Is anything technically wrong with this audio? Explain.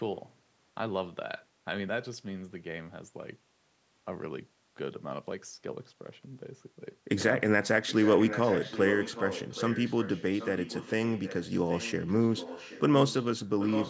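Yes, there is an echo leak from 7.86 to 12.81 s, 13.07 to 13.25 s and 13.59 s to the end. A distinct speech copy trails about 0.77 s behind, roughly 10 to 15 dB quieter, likely a loudspeaker echo the far-end canceller missed. Unlike room reverberation, it is a separate delayed repeat, not a smeared tail.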